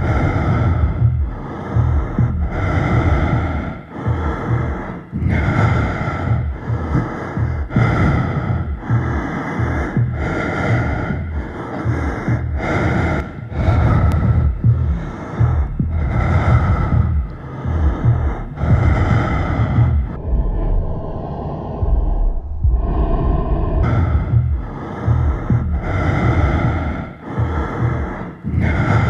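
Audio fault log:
20.16–23.83 s, section at the wrong speed: the sound abruptly drops to half speed, so it drags and sinks roughly ten semitones lower, with speed and pitch falling together. Likely cause is that stretch being played back or edited against the wrong clock.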